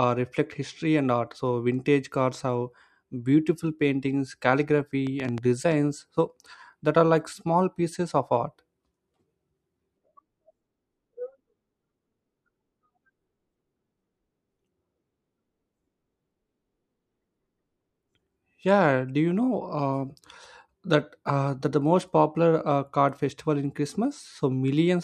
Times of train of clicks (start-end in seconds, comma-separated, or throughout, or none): 5.07-5.73